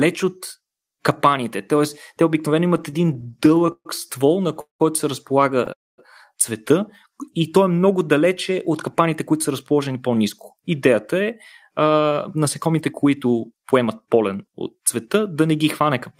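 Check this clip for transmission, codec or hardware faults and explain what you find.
The speech carries four kinds of network-receiver fault, all within the first 15.1 seconds.

Repeated stalls (stutter) run from 2.77 to 3.87 s, starting right after "те обикновено". Packets kept arriving late, so the jitter buffer emptied 17 times, and each time the receiver stretched the last sound to bridge the wait. About 0.3 s of the span, 27%, is concealment, with the longest gap 131 ms. Nothing is lost, but the phrase drags and judders. On a spectrogram the harmonics smear into short flat, repeated stripes; the waveform shows repeated, decaying copies of one cycle.

Two call audio freezes follow, at 4.61 to 4.82 s and 5.73 to 6.00 s. The sound halts, a brief buzzy continuation fades, then silence sits for about 120 ms and 220 ms respectively before the speech resumes where it stopped, with nothing skipped. 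The likely cause is packets held up in transit until the buffer ran dry, pushing the playout delay back by 188 ms and 249 ms. A spectrogram shows a fading smear into a blank vertical band; the waveform flattens.

A jitter buffer slow-down occurs from 7.08 to 7.59 s. To rebuild its reserve, the receiver repeated single pitch periods many times, adding 47 ms so this stretch plays at 92% speed while keeping its pitch. Sounds come out drawn-out. On the spectrogram the harmonics keep their spacing but look stretched in time; the waveform shows runs of near-identical cycles.

A jitter buffer speed-up covers 9.33 to 15.07 s, from after "много далече от капаните" up to "да не". Having built up more audio than it aimed for, the receiver cut out short pitch-period pieces repeatedly, removing roughly 0.4 s so speech runs at about 107% speed at unchanged pitch. It sounds hurried. Spectrogram harmonics stay at the same frequencies but the syllables are compressed, with small discontinuities at the splice points in the waveform.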